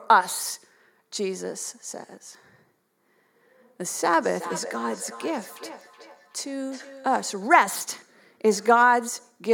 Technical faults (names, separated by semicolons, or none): feedback echo between two devices